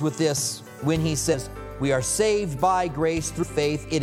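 Brief glitches at 1.33 s and from 3.42 to 3.44 s come from damaged data in a compressed stream: corrupted frames make the decoder misread them and lose sync.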